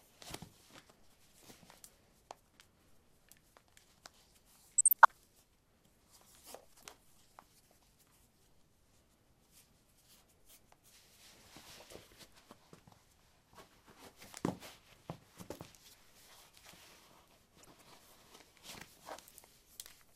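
DAB burbling breaks into this recording of sounds at 4.78 to 5.11 s and again at 17.58 to 17.82 s. Bit errors at a rate of around a third of a percent slip past error correction and corrupt sub-band samples, so short blips of noise appear in individual bands.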